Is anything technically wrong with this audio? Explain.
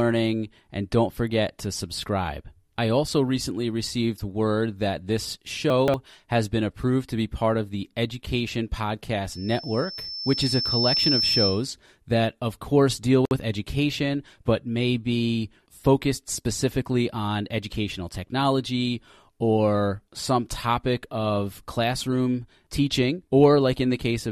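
Yes, there are three faults.

Chunks out of order, 5.70 to 5.94 s, between "received word that this" and "has been approved to": one piece of audio, seemingly a 60 ms chunk, plays about three chunks later than it should. Nothing is missing, but the sequence is scrambled, so this moment sounds jumbled.

Loudspeaker feedback squeal, 9.30 to 11.66 s, ending before "that of course deal": the microphone is picking up its own loudspeaker, and at 5.3 kHz the loop's gain exceeds one. That tone feeds itself, swelling over roughly one and a half seconds into a piercing squeal about 5 dB above the speech.

Gap at a join of encoded pieces, 13.25 to 13.31 s, between "that of course deal" and "with education but may": separately encoded segments were joined without trimming the encoder's start delay and end padding. This leaves a 57 ms gap with smeared edges, after which the speech resumes where it stopped.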